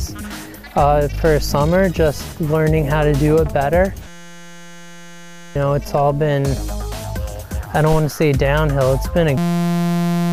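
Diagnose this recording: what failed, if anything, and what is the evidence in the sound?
System hang loop, 4.08 to 5.56 s and again from 9.38 s to the end: a steady 172 Hz buzz. The driver or system froze while the hardware kept replaying one 5.8 ms buffer, which fits 256 samples, losing about 1.5 s and 1 s of audio.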